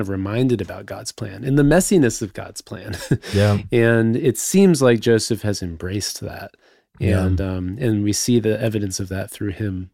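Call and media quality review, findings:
No faults found on review of the speech track; nothing to escalate.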